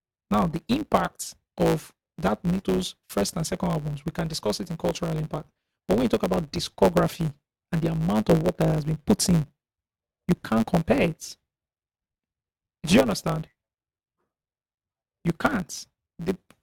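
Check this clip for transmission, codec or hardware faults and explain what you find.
One fault runs through the whole speech clip.

Block size mismatch (truncated), from start to finish: an upstream stage writes longer blocks than the next stage reads, so the tail of every block is discarded. This leaves a buzz at about 109 Hz, the block rate, and the speech runs 1.09 times too fast while keeping its timbre.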